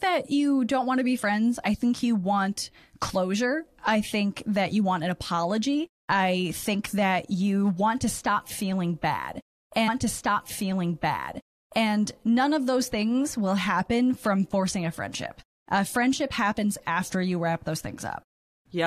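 At 9.87 s, right after "to stop feeling bad", about two seconds of speech play a second time, with a small blip at the jump back, before "none of those things" continues near 11.87 s. This is a stream segment repeated: the player queued the same segment twice.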